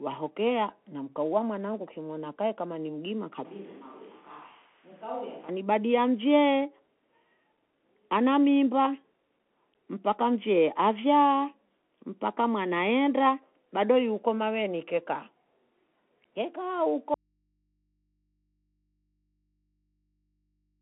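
Throughout the speech, the Bluetooth CVSD headset codec narrows the sound to a telephone-like band of roughly 250 Hz to 3.4 kHz. Its one-bit up-or-down steps, which fit a 64 kbps stream, leave a grainy hiss and scratchy sibilants. A spectrogram shows nothing above 3.8 kHz.

Just after "kae kama ni mgima", from 3.45 to 5.49 s, the sound abruptly turns hollow and roomy, with thinner bass. The level drops by about 10 dB and background noise rises noticeably. This is likely a switch to a distant microphone. The waveform visibly shrinks for those two seconds.

At 17.14 s the speech cuts out abruptly and does not return before the end. Only a very faint mains hum remains, far below the speech level. This is likely an audio dropout to a faint residue. The waveform flattens almost to a line, and the spectrogram shows only thin hum lines.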